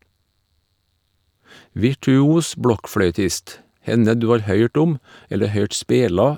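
No technical faults are audible anywhere in the speech.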